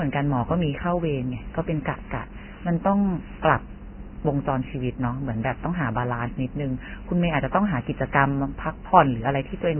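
A speech recording that sounds dull, hissy and grainy throughout, with nothing above about 3.1 kHz; this is likely heavy Vorbis compression at a very low bitrate, near 10 kbps.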